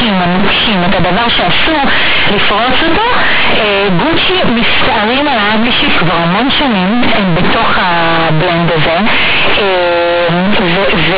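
Very loud, harsh buzzing distortion covers the speech throughout, with heavy noise filling the pauses. This is companded audio read as linear: the mu-law bytes are played as plain 8-bit samples without expansion, so every sign change swings widely and quiet passages come out as loud as peaks.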